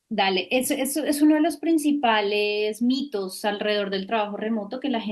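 Listening to the speech recording, nothing technical stood out as wrong.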